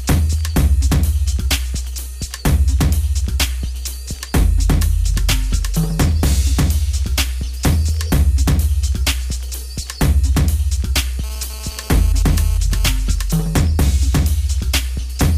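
From 11.24 s to 12.86 s a GSM phone buzz cuts in, about 20 dB below the sound. A nearby 2G handset, here moving data, pulses its transmitter about 217 times a second, and the audio circuitry rectifies those radio bursts into a harsh, raspy tone at 217 Hz with dense harmonics. Unlike mains hum, which is smoother and sits at 50 or 60 Hz, it bears no relation to the sound.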